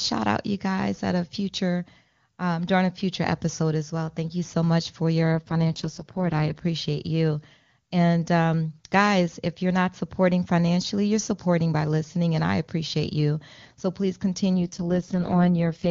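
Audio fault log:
5.32–6.60 s and 14.58–15.89 s: AMR rate drop. Speech turns rough, raspy and synthetic, then clears. Bandwidth holds and nothing drops out. This fits the AMR-WB codec stepping down from 23.85 to its lowest 6.6 kbit/s rate.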